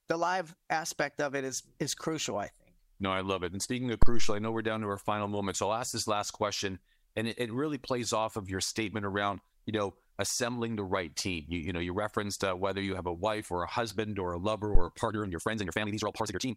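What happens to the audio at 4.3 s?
A phantom power thump hits between 4.03 and 4.47 s, after "speaking of" and before "we're down to our". A supply switched on a live input sends a voltage step through the coupling capacitors. It sounds like a deep thump, decaying in about 100 ms.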